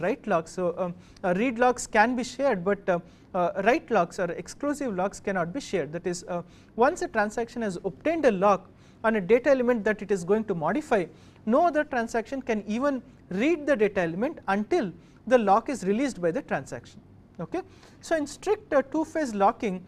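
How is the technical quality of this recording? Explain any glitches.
The recording has no technical faults to report. There are no glitches to explain at any point in the audio.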